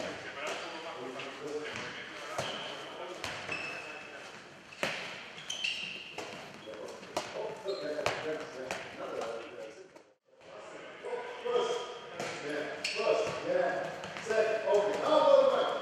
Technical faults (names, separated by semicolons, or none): time-stretched section